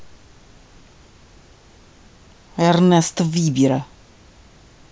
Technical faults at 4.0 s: none

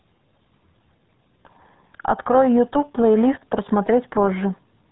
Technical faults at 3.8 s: RealAudio 14.4 codec

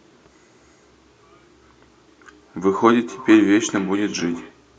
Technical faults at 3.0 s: feedback echo between two devices

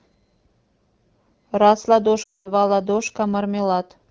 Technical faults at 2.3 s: lost AMR speech frames

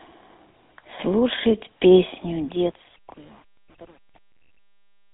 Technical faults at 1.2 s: GSM full-rate codec

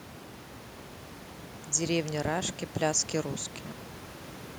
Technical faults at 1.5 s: none

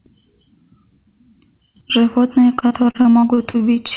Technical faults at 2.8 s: repeated packet loss (robotic sound)

